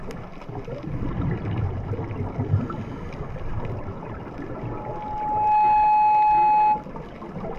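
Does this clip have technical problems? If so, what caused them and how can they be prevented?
Yes, there are two faults.

Damaged data in a compressed stream, from 1.58 to 1.64 s: a brief blip where the decoder hit corrupted frames it could not read correctly, lost sync and skipped ahead to the next valid frame header. The result is a short burst of garbled sound. To prevent it, store and transmit the compressed file over a checked, error-free path and verify its integrity before playback.

Loudspeaker feedback squeal, from 4.56 to 6.87 s: a steady 848 Hz tone builds over about a second into a squeal that sits roughly 10 dB above the rest of the sound. A microphone was picking up the loudspeaker it fed, and at that frequency the loop gain exceeded one, so the tone kept reinforcing itself until it was limited or the loop was broken. To prevent it, keep microphones out of the loudspeakers' coverage, reduce gain, or notch out 848 Hz.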